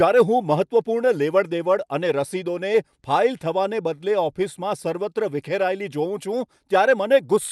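Nothing stood out on listening to this speech, which comes across as it would over an ordinary call connection.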